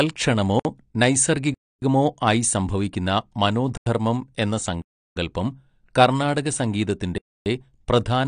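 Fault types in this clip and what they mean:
AAC compression: The speech sounds dull and smeared, with a warbling, fizzy edge on sibilants. Nothing is present above 9.8 kHz. The likely cause is AAC-LC coding at a low bitrate, which trims the high bands and quantises the rest coarsely.
block of digital silence: The sound cuts to silence and back with no fade. Holes start at 0.60, 1.54 (ending just before "ആയി സംഭവിക്കുന്ന"), 3.77, 4.82 and 7.18 s. They last 56 to 344 ms.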